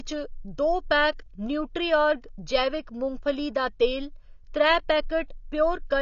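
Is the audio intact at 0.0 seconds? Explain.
No. From the very start the speech sounds dull and smeared, with nothing above 6.9 kHz and a fizzy, warbling edge on sibilants, throughout the clip. This is likely AAC compression: the codec discarded the upper spectrum and coarsely quantised the rest, which fits a low bitrate near 24 kbps.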